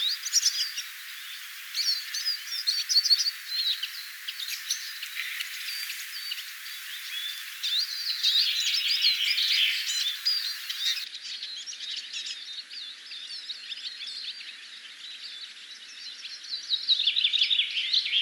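From 11.04 s to the end, the sound drops about 5 dB, loses everything above 11.4 kHz and gains a new noise floor, likely an input switched to a poorer device.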